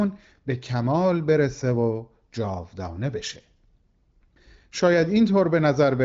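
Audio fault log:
No faults to log for this speech audio.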